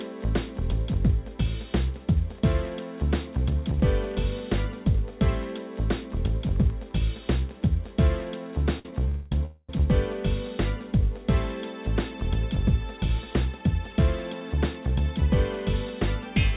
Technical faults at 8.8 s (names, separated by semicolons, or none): short stall from a late packet